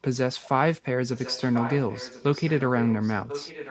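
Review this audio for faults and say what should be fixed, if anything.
Echo leak at 0.41 to 0.49 s, then from 1.08 to 2.62 s and from 2.78 s to the end: a delayed copy of the speech, trailing about 1.04 s behind, comes back into the signal. The first scrap is faint, but the two longer stretches sit only around 10 dB below the main speech. The likely cause is a far end playing the call on a loudspeaker whose echo canceller let part of its microphone pickup through. Fix this by making that end use a headset or by improving its echo cancellation.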